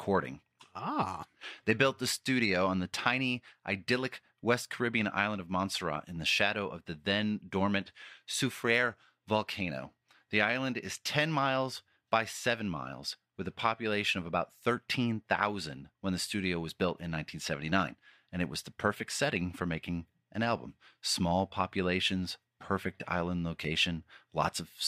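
No technical faults can be heard anywhere in the speech.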